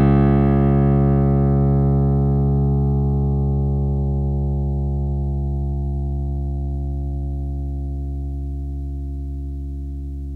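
From start to finish, stereo read as mono: interleaved left and right samples play as one channel, so the sound runs at half speed and an octave low.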